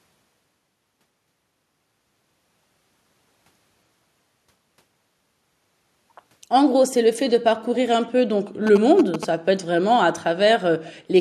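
At 8.67 to 9.25 s, GSM signalling bursts from a nearby 2G phone get rectified in the audio path, producing galloping ticks and 217 Hz buzzing only slightly below the speech.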